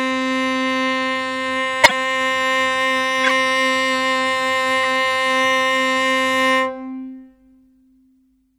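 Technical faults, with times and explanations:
Throughout, MP3 compression: Codec damage is plainly audible, likely from MP3 encoding at a low bitrate that fits 64 kbps. With too few bits, the encoder drops weak frequency lines that flicker from frame to frame. The music sounds watery and swirly, and attacks are smeared.
1.82–1.91 s, 3.24–3.31 s and 4.82–4.85 s, corrupt frame decoded: Damaged bits in a few consecutive compressed frames were decoded anyway. Misread gains and codes put energy at the wrong frequencies, producing brief chirpy bursts, the first the loudest, then peaking about −5 dBFS and about −10 dBFS.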